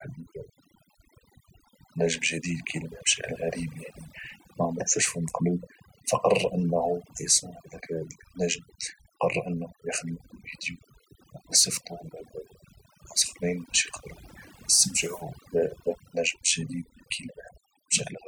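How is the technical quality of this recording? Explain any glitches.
The recording suffers from overdone noise removal throughout. Noise reduction set far too aggressively keeps cutting individual frequency bands that sit near its noise estimate, taking quieter parts of the speech with them. Pauses collapse into near silence dotted with twinkling artefacts.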